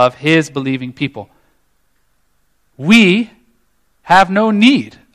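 Hard clipping runs from the very start to 0.37 s, ending just before "believing people". The speech is driven about 4 dB past what the stage can pass, so its peaks are sliced flat. Those flat tops add high harmonics, heard as a crackly fuzz on the loudest moments.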